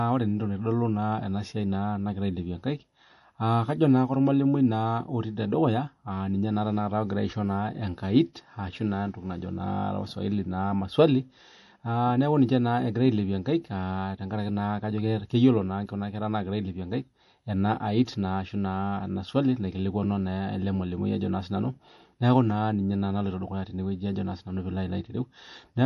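From start to finish the speech carries plainly audible MP3 compression. Nothing comes through above about 11.5 kHz, so the top end sounds dull. The swirly, watery texture fits a likely low bitrate around 48 kbps, with weak frequency lines dropping in and out between frames.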